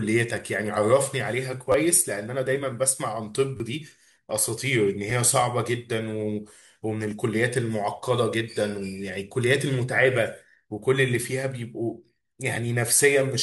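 At 1.72 to 1.74 s, 3.57 to 3.60 s, 5.10 s and 7.11 s, the speech shows a repeated buffer. Fresh audio arrived late, so playback looped the last block. Each segment lasts about 10 ms, which fits a 10 ms buffer. It plays twice extra, then three times, then once, and once again. At this size the repeats sound as a brief buzz or click rather than a clear stutter. Roughly 20, 30, 10 and 10 ms of speech go missing in turn.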